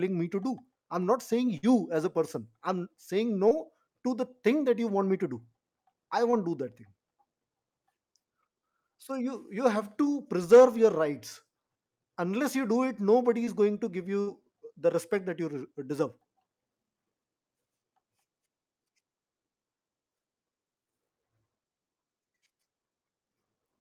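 At 1.57 to 1.65 s and again at 14.21 to 14.29 s, a burst of packet loss drops about 60 ms of speech each time. The receiver extends the last sound for roughly 55 to 60 ms, fading it down, then rejoins later with that stretch missing.

Short concealed packet loss hits at 3.49 to 3.53 s, 6.31 to 6.35 s and 13.45 to 13.49 s, each time about 20 ms arriving too late. The decoder patches the hole by continuing the preceding sound and blending back, leaving a brief smear or wobble.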